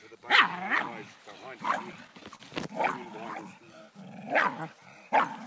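Audio carried over a WebRTC call path whose coding, with nothing above 8 kHz, fits G.722 at 64 kbps. From 1.66 to 2.41 s there are repeated stalls (stutter): six short gaps, the longest 42 ms, about 96 ms in all, where the jitter buffer ran dry and the receiver stretched the last sound until packets arrived, so the audio drags but nothing is lost. From 3.64 to 4.80 s a jitter buffer slow-down repeats pitch periods to rebuild its reserve, adding 60 ms and running the audio at 96% speed with unchanged pitch.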